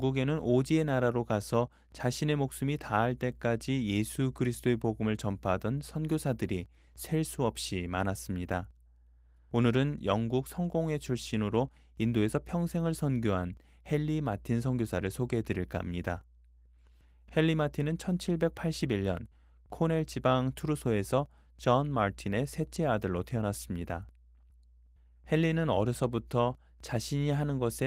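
Nothing goes wrong in this one; the speech comes through Opus voice compression in its hybrid, fullband mode at 24 kbps with only a light touch of coding wear, and no faults turn up along the way.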